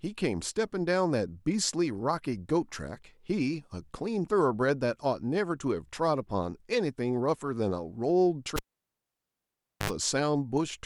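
Speech, interrupted at 8.56 s by a cable pulled and plugged in: a pop, about 1.29 s of near silence, a 73 ms burst of 50 Hz mains buzz as the plug tip makes contact, then another pop at 9.90 s. The waveform shows two spikes around a flat gap, and the spectrogram shows a short stack of 50 Hz harmonics.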